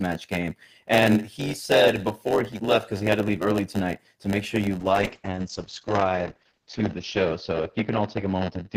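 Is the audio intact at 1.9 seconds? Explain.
No. At 1.9 seconds, as throughout the clip, there is a block size mismatch (padded). One stage hands over blocks slightly shorter than the next stage expects, and the missing tail of each block is filled with silence. Those brief zero gaps recur at about 92 Hz, heard as a steady buzz under the speech, and the stretching slows delivery to 0.919 times normal speed while the timbre stays.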